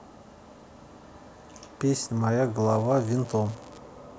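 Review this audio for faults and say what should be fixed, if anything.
From 2.60 to 3.82 s a steady crackle and fizz runs under the speech and through its gaps: an unreliable data bit, randomly flipping samples by equal steps of about -33 dBFS. Fix the marginal data line by reseating or replacing the cable or connector and checking signal timing at the converter.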